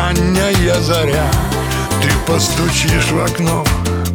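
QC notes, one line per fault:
Nothing stood out on listening.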